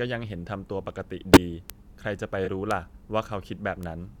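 At 1.34 to 1.37 s a corrupt frame decoded produces a loud glitch lasting a couple of frames. Flipped bits were decoded as if valid, misplacing energy across frequencies, so a spectrogram shows a bright, smeared block and the waveform jumps to about -5 dBFS.

At 1.70 s comes a bit error spike: a single sample jumped by a power of two and returned, heard as one sharp tick. It appears as a lone vertical needle in the waveform and a thin full-height line on a spectrogram.

From 2.45 to 2.48 s a corrupt frame concealed leaves a patched-over stretch instead of a glitch. The decoder detected the damage and covered roughly one frame itself.

Further bit error spikes occur at 2.71 s, where three consecutive samples are affected, and at 3.83 s, where a single sample is hit. Each is a similar isolated tick and a needle-thin broadband line.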